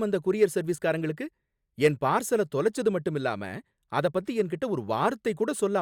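Speech recording; no technical faults detected.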